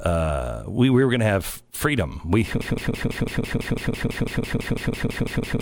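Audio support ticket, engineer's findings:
Broken-record loop from 2.61 s to end: a 166 ms fragment repeats back to back 18 times. Player or stream likely stalled, re-sending last buffer, and the speech due in that span is lost.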